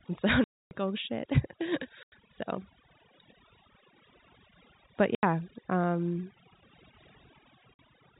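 A noise reduction stage set far too aggressively runs across the whole clip. Any frequency band that comes close to its noise estimate is pushed almost to nothing, and the quieter parts of the speech are removed along with the hiss. The background falls to near silence broken by small twinkling specks. The voice is already limited to the telephone band below 4 kHz by the G.711 link. This is overdone noise removal.

Packet loss filled with silence also breaks up the speech in four places. The receiver loses stretches of the stream and plays silence in their place. The longest gap runs from 0.44 to 0.71 s, about 270 ms. Shorter holes follow at 2.03 to 2.12 s (90 ms), 5.15 to 5.23 s (80 ms) and 7.74 to 7.79 s (50 ms). All of these lengths are multiples of 10 ms, which fits 10 ms packets. Each gap starts and stops abruptly, so the speech is chopped off.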